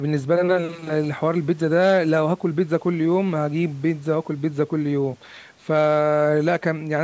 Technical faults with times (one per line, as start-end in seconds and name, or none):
none